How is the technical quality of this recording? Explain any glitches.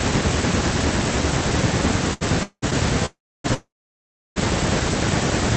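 The speech has timing faults in its middle section, all stalls rather than lost audio, over a call link whose band stops near 8 kHz.

Short stall from a late packet, 2.13 to 2.23 s: one packet arrived late and the jitter buffer ran dry. The receiver held the last sound for 75 ms, then resumed from the same point. Nothing is missing, but a sound drags briefly with a slight buzz or dip.

Call audio freeze, at 2.43 to 2.64 s, 3.06 to 3.46 s and 3.54 to 4.38 s: the likely cause is packets delayed in transit, emptying the jitter buffer. Each time the last sound carries on as a fading buzz or hiss, then silence of about 80, 290 and 690 ms. The speech then resumes intact but later.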